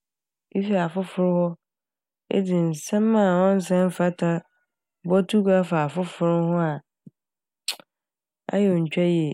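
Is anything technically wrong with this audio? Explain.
No, nothing technically wrong stood out on listening to this speech clip.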